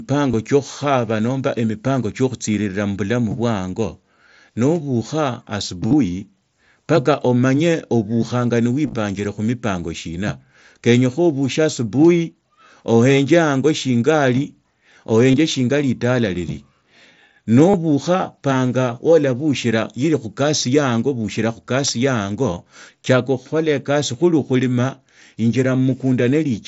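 Concealed Bluetooth headset packet loss occurs at 0.31 s, just before "tsiokhukhaba nomba emipango", at 2.53 s, at 5.87–5.93 s right after "mubilamu bwe ango nobukha", at 8.86–8.94 s, at 15.31 s before "shinga litala lili", at 17.71 s and at 21.87 s. Lost headset packets were patched by repeating the best-matching recent stretch of waveform. Unlike a dropout to silence, each gap stays at full level. The longer scattered spans at 5.9 s and 8.9 s leave a brief buzzy tone and a slight warble as real sound resumes.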